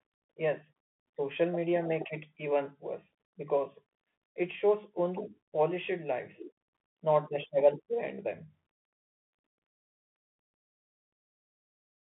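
A speech clip carried throughout by a Bluetooth CVSD headset codec: nothing above 3.8 kHz survives, and loud high sounds outrun the adaptive step, adding scratchy sibilants over granular hiss.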